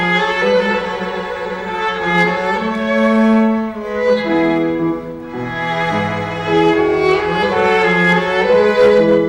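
Hard clipping from 2.13 to 2.24 s and from 6.55 to 9.19 s, driven about 4 dB and about 6 dB over: peaks are cut flat, adding crackling high harmonics rather than a limiter's smooth compression.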